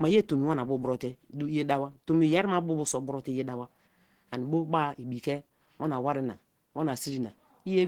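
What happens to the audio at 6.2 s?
At 6.2 s you're hearing the same Opus compression damage that runs through the whole clip, not a separate event. The speech comes across muffled and hoarse, with a grainy roughness that's plainly audible. That character points to a low bitrate, something like 16 kbps, where the encoder has most likely dropped into its hybrid speech mode and fills starved bands with folded or noisy content. The bandwidth itself stays wide, with content reaching up to about 20.2 kHz.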